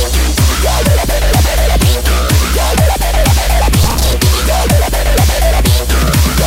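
At 3.83 s a burst of processor overload crackle kicks in and runs to 4.13 s. The processor is falling behind on short buffers, roughly 10 ms each, missing around twenty deadlines, and every miss replays a scrap of old audio with hard edges, so you hear gritty tearing until the load eases.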